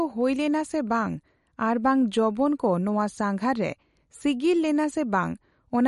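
Throughout the speech the treble stops dead at 11.2 kHz, and the sound has a plainly audible watery swirl, with s sounds turning chirpy. That likely comes from MP3 compression at a low bitrate, around 48 kbps. Unlike a simple low-pass filter, weak frequency components flicker on and off between frames.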